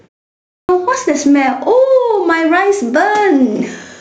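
Gain pumping runs through the whole speech clip, with the gain swinging by around 10 dB. This likely comes from input gain set far too high, with a fast limiter clamping every peak and squashing the dynamics.

A clipped start after a pause follows at 0.43 s. After 0.43 s of silence, the output device needs time to wake or relock, so the first 0.26 s, up to 0.69 s, is swallowed and speech bursts in abruptly without its opening sounds.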